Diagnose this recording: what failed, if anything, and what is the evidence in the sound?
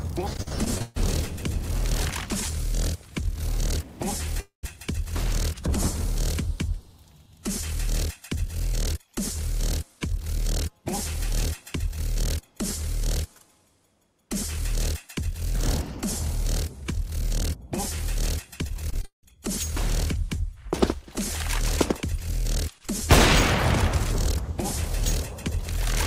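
Choppy stretches run from 0.33 to 1.02 s and from 18.68 to 19.41 s, each broken by seven short holes, the longest 137 ms and 180 ms. This is repeated packet loss on the network path: the receiver stretches the last sound over each hole, masking roughly two fifths of each span.

At 4.40 s the sound smears into a fading buzz, falls silent for about 120 ms, and resumes at 4.73 s with around a quarter second missing. This is likely a long network dropout, with the receiver extending the last sound until it died away.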